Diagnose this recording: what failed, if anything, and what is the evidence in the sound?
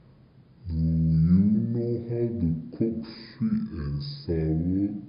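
Wrong sample rate, throughout the clip: the speech is slow and low, running at about two-thirds speed and dropping roughly 7 semitones. This points to playback-stage clocking, with samples taken at 48 kHz and played at 32 kHz without any conversion.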